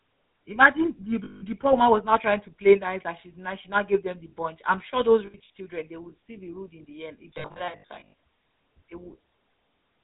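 Throughout, the speech carries the buzzy, gravelly roughness of the GSM full-rate codec, plainly audible and consistent with a 13 kbps coder. Its pulse-driven vocal-tract model discards fine excitation detail. A spectrogram shows nothing above 4 kHz and coarse, smeared harmonics.

Lost GSM frames follow: from 1.24 to 1.45 s, between "imagine the" and "poor woman was now", about 180 ms of sound is held as a metallic ring. Scattered dropouts recur from 5.26 to 5.5 s, after "bunch I'm sure those", and from 7.34 to 8.14 s, after "in the end if". In these stretches the last good frame's settings are reused.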